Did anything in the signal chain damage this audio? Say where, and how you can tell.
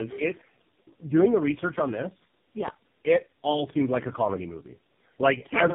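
Yes, at the codec stage: tandem speech coding runs throughout. The rough, muffled, warbly quality fits three low-rate speech codecs in a row, likely G.723.1, GSM full rate and AMR-NB, each recoding the last one's damage. A spectrogram shows smeared, wobbling formants and nothing above 3.7 kHz.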